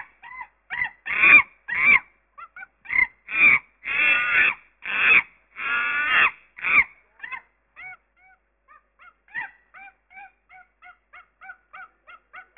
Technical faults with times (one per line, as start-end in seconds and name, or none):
0.00-12.57 aliasing